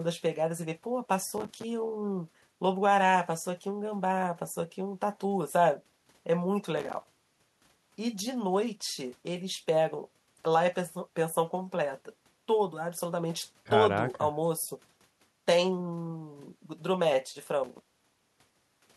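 A speech recording with three bursts of processor overload crackle: 1.38 to 1.64 s, 6.77 to 7.60 s, and 17.64 to 18.57 s. Within each burst, roughly 20 to 70 very short silent holes, each fitting a buffer of roughly 5 ms, tear through the sound, so the speech turns gritty and broken until the load eases. Clipping distortion stays tied to loud peaks, but this crackle comes in dense clusters of gaps regardless of level. Network dropouts leave fewer, longer holes.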